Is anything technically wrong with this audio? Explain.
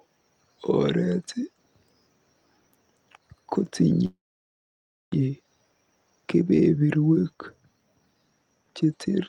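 Yes. From 4.05 to 5.14 s there is a call audio freeze: a short fading tail, then 0.95 s of silence, then the sound resumes where it stopped. The jitter buffer likely ran empty while packets were delayed, inserting a 1.07 s gap with nothing lost.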